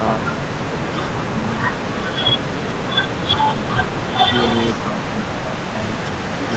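An echo canceller likely mistook overlapping talk for echo, causing speech suppressed in double talk: from 0.18 to 3.54 s, sound dips in pieces by up to about 30 dB, and again from 4.82 s to the end, by about 15 dB.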